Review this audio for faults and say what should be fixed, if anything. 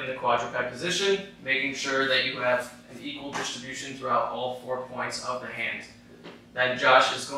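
Nothing here needs fixing, since no faults turn up anywhere in the recording.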